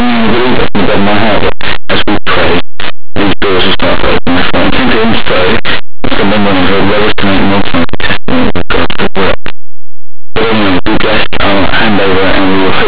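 From start to finish the speech is marred by harsh, very loud distortion: linear audio read as companded. Plain 8-bit samples were expanded as mu-law codes, so values just on one side of zero jump to huge outputs while those on the other side stay small. Ordinary 8-bit grain would sit far lower, about 50 dB down.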